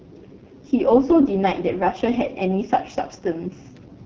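From start to finish the speech carries heavy AMR wideband (HD Voice) codec damage. The sound has the rough, raspy quality of the codec's lowest rate, which fits about 6.6 kbit/s. At that rate the pulse-driven vocal tract model has too few bits to track the voice accurately. Content stops near 6.9 kHz. The top band above roughly 6.4 kHz is synthetic shaped noise rather than real detail.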